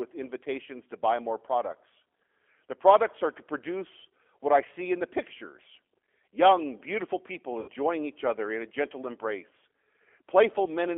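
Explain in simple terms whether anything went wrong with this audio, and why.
Two things went wrong. Throughout, the speech passed through the G.729 codec, a low-data phone codec that rebuilds the voice from a simplified model instead of sending the actual waveform. That clearly shows: sound is confined to a phone band of about 300 Hz to 3.4 kHz, and the voice has a rough, synthetic edge.

At about 7.60 to 7.69 s, just after "pictures young beautiful people" and before "each other in a", there is VoIP packet loss concealed by the speech codec. About 80 ms of audio never arrived, so the decoder filled the gap by stretching its last sound into a fading buzzy tone or noise.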